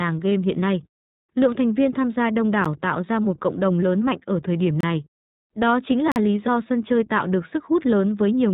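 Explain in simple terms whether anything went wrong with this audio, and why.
Yes, a few things went wrong. First, the whole speech clip went through the iLBC codec, a phone-call style voice compressor. It keeps only the lower part of the sound, nothing above about 4 kHz, so everything comes across muffled, like a phone line. It also rebuilds the voice from a simplified model, 20 ms at a time, which leaves it noticeably rough and a bit synthetic throughout.

Second, there's a spot of lost iLBC frames at about 0.30 s. One 20 ms chunk of audio never arrived, so the decoder papered over it by repeating the last bit of voice with some noise mixed in. You'd hear it as a tiny held, slightly buzzy smear. Because each iLBC chunk stands on its own, the voice snaps back right away.

Third, there are three blocks of digital silence: at 2.65 s (about 11 ms), 4.81 to 4.83 s (about 26 ms), and 6.12 to 6.16 s (about 43 ms). 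In each one the sound cuts out and comes back with no fade. The shortest is more of a tick, and the longest is a small audible hole. The first and last fit a 512-sample and a 2048-sample buffer, which points to the playback side likely not filling its buffer in time.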